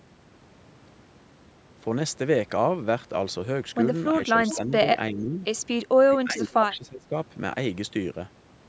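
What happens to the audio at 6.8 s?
Speech suppressed in double talk, from 6.09 to 7.15 s: the speech sinks by roughly 20 dB for about a second. The likely cause is an echo canceller that, with both sides talking at once, mistook the talker for loudspeaker echo and turned it down.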